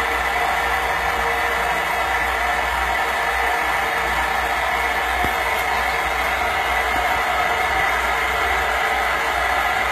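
HE-AAC compression is likely, throughout: the treble is rebuilt from copied lower bands, so highs sound gritty and metallic, pointing to about 20 kbps, with nothing above 14.9 kHz.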